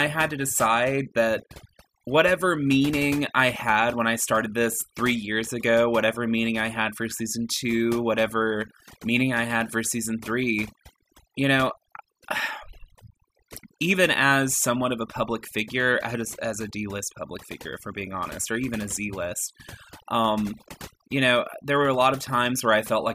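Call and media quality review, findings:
Overdone noise removal, throughout. Background gated to near silence, leaving twinkling specks where isolated bands flicker above and below the suppressor's noise estimate. Quiet low-level speech components fall near that estimate and get pulled down with the noise. Probable component: noise suppression stage, set too aggressive for this recording's noise floor.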